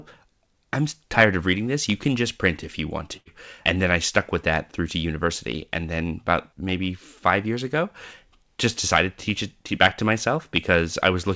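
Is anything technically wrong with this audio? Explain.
Yes. There is a burst of packet loss from 3.17 to 3.29 s, just after "print if you want". Packets went missing in transit, and the receiver filled about 86 ms by extending and fading the last sound. The speech then resumes with roughly 90 ms skipped, all within a G.722 call path that carries nothing above 8 kHz.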